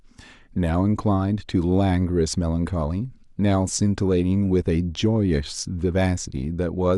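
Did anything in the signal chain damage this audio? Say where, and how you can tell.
No, nothing in the signal chain damaged this audio.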